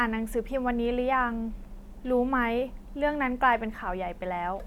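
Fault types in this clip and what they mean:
No technical faults can be heard in this speech recording; the signal stays continuous throughout.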